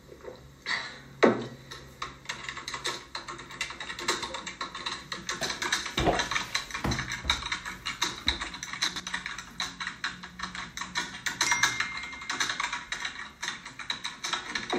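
At 8.88 to 9.0 s, a 40 ms chunk arrives two chunks late, so three chunks play out of order. The sound jumbles briefly, with three hard joins. Unlike a dropout or repeat, no audio goes missing or recurs.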